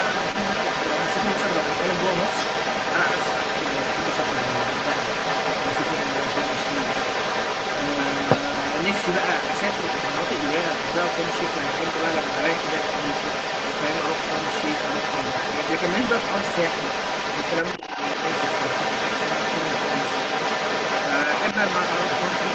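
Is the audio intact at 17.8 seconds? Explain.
No. Right there, from 17.77 to 17.98 s, you get speech suppressed in double talk. The talker's level dips by around 10 dB, in pieces adding up to roughly 150 ms, so the voice briefly sinks and thins out. That's likely the echo canceller hearing both sides at once, failing to tell its own talker from the loudspeaker echo, and pulling everything down together rather than risk passing echo through.

There is also the other side's voice leaking through, which runs across the whole clip and is still present at 17.8 s. That second voice sits at about the same level as the main talker, so it's no faint background trace. It's most likely coming from the far end playing on the talker's loudspeaker, reaching the microphone, and not being fully cancelled.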